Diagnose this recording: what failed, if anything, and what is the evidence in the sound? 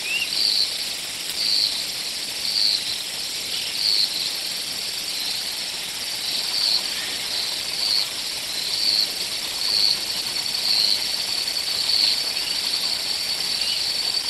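Nothing in the signal chain appears to have failed: the audio stays continuous and stable in level throughout, with nothing in the sound pointing to a problem at any stage from capture to playback.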